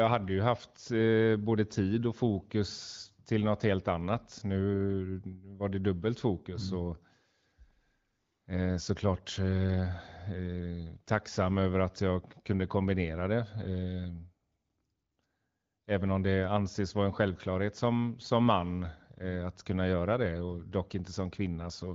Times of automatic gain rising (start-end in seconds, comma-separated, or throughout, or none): none